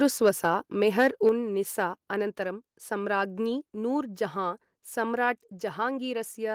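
From 0.99 to 1.29 s, the loudest peaks of the speech flatten out against a hard ceiling. This is microphone overload. The tops of the waveform are sheared off, with the signal pushing about 3 dB past the converter's limit and a few percent of samples clipped. The likely cause is an input gain set too high for this talker. It sounds harsh and crackly, a gritty edge on the strongest syllables in that stretch.

At 1.3 s, right after that distorted burst, the level drops suddenly by about 5 dB. This is the microphone volume being stepped down. The voice and the room behind it fall together, in a single step rather than a gradual fade. That points to the input volume being lowered automatically once the clipping was detected, most plausibly by the call software. The speech continues noticeably quieter from there.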